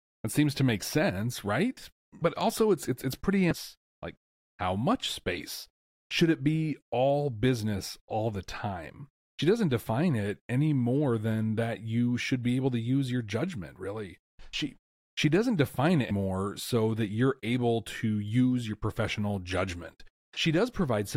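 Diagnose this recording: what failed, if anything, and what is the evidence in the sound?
Codec stage: damaged data in the compressed stream causes two blips, at 3.51 s after "it's it's it's pretty" and at 16.09 s before "so that you're able". Corrupted bytes made the decoder misread frames and resync at the next header. Spectrograms show thin broadband streaks; waveforms show brief discontinuities.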